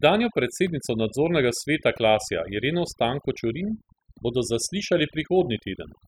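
Overdone noise removal runs through the whole clip, from the first second to the last. A noise reduction stage set far too aggressively is pulling individual frequency bands down, or out entirely, whenever their level sits close to its estimate of the background noise. Between phrases the background collapses to near silence dotted with twinkling specks, and the quieter components of the speech get cut along with the noise.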